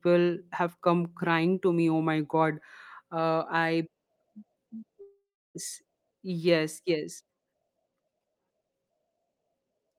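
At 5.01 s the speech breaks off and the last sound is stretched into a buzzy tail that fades, leaving roughly a third of a second of near silence before the speech resumes at 5.57 s with about 0.54 s of it gone. This is likely a long network dropout. Unlike a brief packet loss, where the concealment bridges the gap almost seamlessly, here the fill runs out and dies away, and the speech picks up later without the missing portion.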